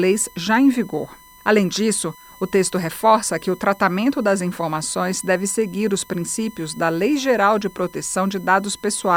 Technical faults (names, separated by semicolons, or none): USB whine